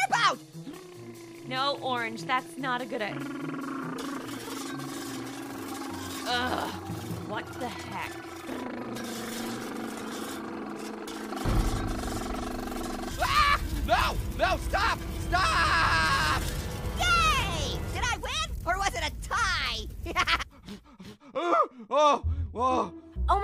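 At 20.41 to 20.43 s the sound jumps abruptly forward with a brief blip, and what follows does not continue from what came before. The likely cause is a stream segment skipped: one chunk of a segmented stream failed to arrive and the player moved straight on to the next, dropping that stretch of programme. On a waveform this appears as a sudden discontinuity; a spectrogram shows a thin vertical broadband stripe with the spectral pattern changing on either side.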